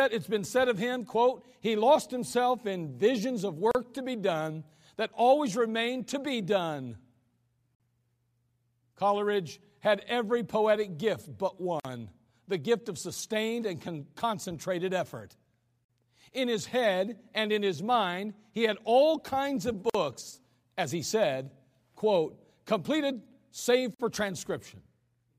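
Gaps at joins of encoded pieces at 3.71, 7.75, 11.80, 15.85, 19.90 and 23.95 s, every 4 s: unremoved encoder delay and end padding open silences of 35 then 49 ms mid-speech.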